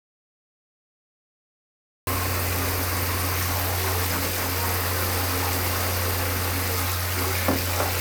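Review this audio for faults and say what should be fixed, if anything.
Audio dropout to silence runs from the very start to 2.07 s. The input path was likely interrupted, by a disconnected device, a failed link or a mute left engaged, while the recorder kept writing silence. The clip therefore opens in silence with no room tone at all, and the sound arrives abruptly at 2.07 s, already mid-flow. Whatever occurred during those first two seconds was never captured. To prevent this, confirm live input on the meters and secure connections before recording starts.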